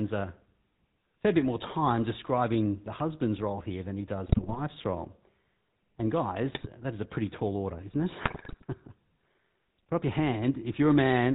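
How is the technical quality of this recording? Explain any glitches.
Poor, with audible coding damage throughout and three short bursts of corruption.

GSM full-rate codec, throughout: the speech has the buzzy, gravelly roughness of this early vocal-tract model, consistent with its 13 kbps rate. A pulse-train excitation that keeps only a third of its samples plainly coarsens the voice, and nothing above 4 kHz survives, leaving it dull and narrow.

GSM bit errors, at 4.26–4.59 s after "role here than he", 6.52–6.67 s before "that is a pretty", and 8.24–8.64 s after "tall order isn't it": corrupted filter, pitch and gain values distort frames, producing squawks, pops and gargling bursts with sudden level jumps.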